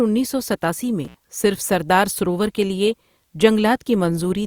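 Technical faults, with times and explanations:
1.05 to 1.15 s, intermittent contact: the speech drops out abruptly with a crackle at each edge, leaving only faint hiss for about 70 ms. A loose plug or cable briefly lost connection, breaking the signal path before the contact closed again.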